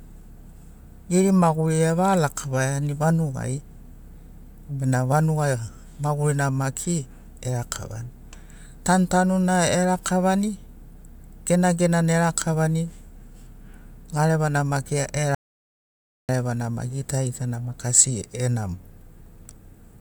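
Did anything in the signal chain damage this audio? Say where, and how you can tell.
Yes. The input feeding the recorder was lost for a moment, likely a dropped device link or a brief mute upstream of the converter, while the recorder kept writing silence. From 15.35 to 16.29 s the speech cuts off into dead silence with no room tone, and about 0.94 s of speech is gone.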